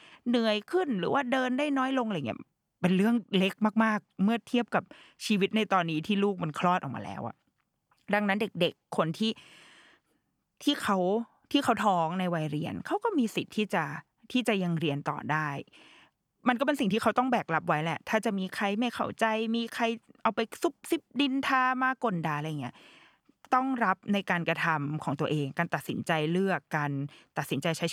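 No technical faults can be heard anywhere in the recording, and the speech signal is intact throughout.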